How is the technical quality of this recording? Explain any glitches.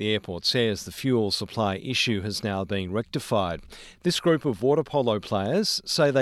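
No glitches can be heard anywhere in the recording. Nothing in it needs explaining.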